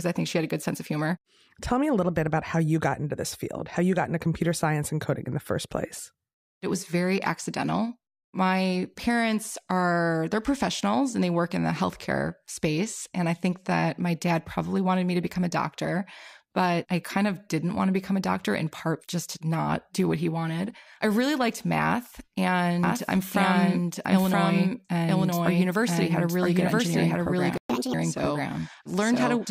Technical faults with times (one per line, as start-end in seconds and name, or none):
22.83-29.50 doubled audio track
27.58-27.70 playback stall
27.70-27.94 catch-up at higher speed